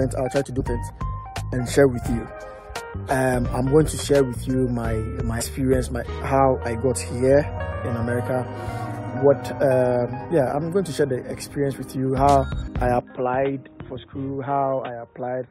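At 0.59–0.62 s, 5.40–5.42 s and 10.30 s, damaged data in the compressed stream makes the decoder lose sync, giving brief glitches. From 13.0 s to the end, the sound abruptly turns boxy, nothing above 3.8 kHz, about 5 dB quieter, with a faint new noise floor and no gap, likely the input switched to a poorer device rather than a filter.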